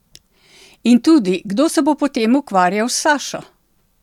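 A speech recording with nothing technically wrong with it.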